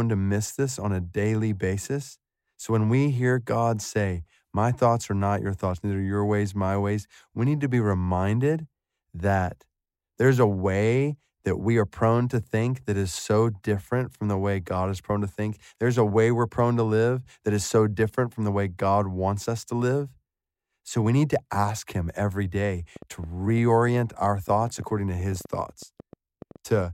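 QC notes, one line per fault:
22.96–26.81 s, train of clicks: a run of around thirty sharp, near-identical pulses arrives at about 8.6 per second but with uneven spacing, so it sounds like erratic ticking laid over the speech and continuing through the pauses. The clicks peak at roughly the same level as the speech. Repeated short impulses of one shape like this likely come from electrical interference from nearby equipment or a faulty connection or power supply.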